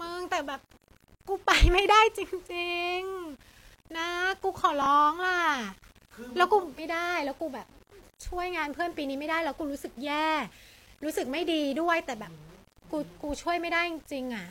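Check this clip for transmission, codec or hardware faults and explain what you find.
Two faults are present: a grainy quantisation distortion running through the whole recording, and one brief reordering of audio at 4.82 to 4.86 s.

Throughout, the likely cause is low bit depth without dither: the samples appear to have been rounded to something like 8 bits with no noise added first. The rounding error tracks the speech, leaving a gritty distortion roughly 30 dB below it that grows harsher as the speech grows quieter.

At 4.82 to 4.86 s, chunks arrive out of order: one 20 ms block came in a chunk late and was played after the block that should follow it. No audio is missing, but the sequence is scrambled, causing a short jumbled stutter.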